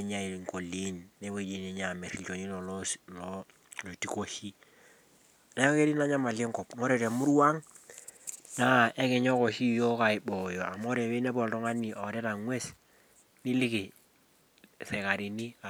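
Nothing in the signal points to a technical fault at any point in this recording of speech.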